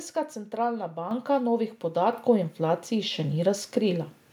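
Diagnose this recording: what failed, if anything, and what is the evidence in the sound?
The level jumps upward twice in discrete steps, at 1.11 s by about 7 dB and at 2.13 s by about 5 dB, with the speech and the background rising together. This is the microphone volume being stepped up in the call-processing stage: automatic gain control judged the input too quiet and raised the device's input volume in single increments. Because the whole input signal is scaled, the background rises with the speech instead of the speech alone getting louder.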